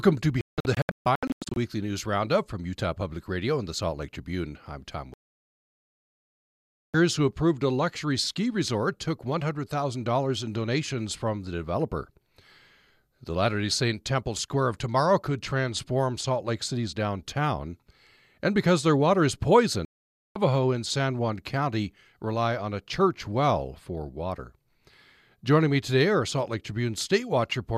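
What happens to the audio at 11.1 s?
Nothing goes wrong at 11.1 s; the speech runs through that moment intact, with no break, glitch or change in the sound.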